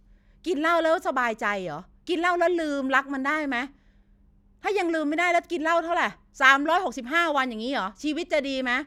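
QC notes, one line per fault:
Nothing to flag here; the speech comes across with no technical faults to note.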